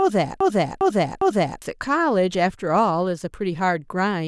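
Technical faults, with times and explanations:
0.00–1.62 s, broken-record loop: a 0.40 s speech fragment repeats exactly, three times, already looping at the start. Playback likely stalled, resending its last fragment.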